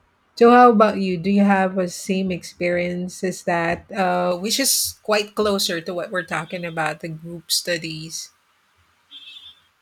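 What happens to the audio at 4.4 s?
From 4.32 s, right after "same experience as that", to the end, pre-emphasis is left on: treble stays about 11 dB hot at 10 kHz, sounding thin and sibilant.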